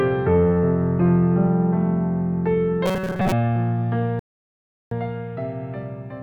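From 2.86 to 3.32 s the sound goes rigid and metallic, a fixed buzz at 188 Hz laid over it while the rough shape of the audio still shows through. This is robotic sound from repeated short buffers. The likely cause is new audio arriving too late, so the software kept replaying a snippet of about 5.3 ms, which matches the buzz period, while much of the real material in that stretch was skipped.

At 4.19 s the audio drops to silence and stays there until 4.91 s, then picks up exactly where it left off. This is a rebuffering stall: the player ran out of downloaded audio, waited for more, and resumed once it arrived. Nothing is missing on either side of the gap, but the pause stretches the timeline by about 0.72 s.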